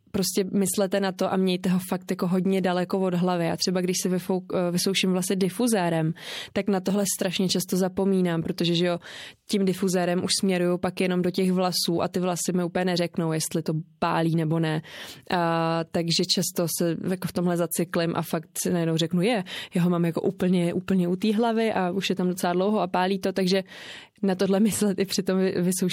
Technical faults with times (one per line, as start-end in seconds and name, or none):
1.17 pre-echo
2.07 pre-echo
20.87 pre-echo